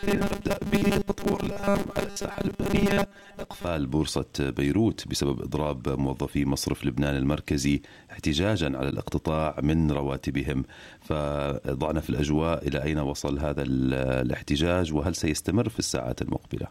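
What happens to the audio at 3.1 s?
New audio likely arrives too seldom, so roughly 5 ms chunks repeat over most of the sound: robotic sound from repeated short buffers, a rigid 200 Hz buzz from 0.01 to 3.67 s.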